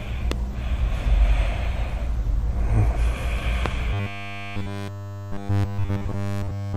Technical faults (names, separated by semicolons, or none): loud pop; robotic sound from repeated short buffers